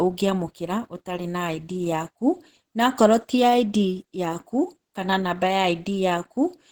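A speech clip with plainly audible Opus compression damage throughout. It sounds hoarse, grainy and muffled, which fits a low rate of around 16 kbps in the codec's hybrid mode, the likely cause. A spectrogram would show upper bands filled with diffuse, noise-like texture instead of crisp harmonics, with nothing above about 20.3 kHz.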